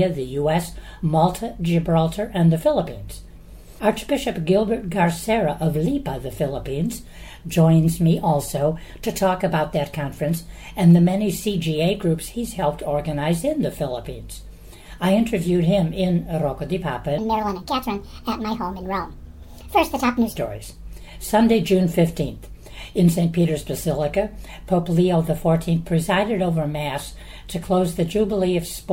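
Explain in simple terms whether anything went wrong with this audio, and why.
A section at the wrong speed, likely from a mismatched playback clock: from 17.18 to 20.36 s the sound runs 1.43 times too fast and about seven semitones higher.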